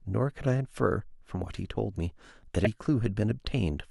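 A brief glitch cuts into this speech clip at about 2.65 s, lasting about 18 milliseconds before the audio carries on. It is the sound of damaged data in a compressed stream: a stretch of the encoded file arrived corrupted, so the decoder misread or rejected the frame at that point, lost its place in the stream, and produced that glitch until it found the next valid frame header and locked back on.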